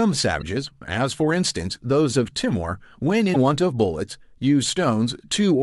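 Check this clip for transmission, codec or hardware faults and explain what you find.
Two short faults, both damaged data in a compressed stream, at 0.38 to 0.43 s and 3.31 to 3.36 s: corrupted bytes make the decoder lose frame sync, producing a brief glitch in the speech.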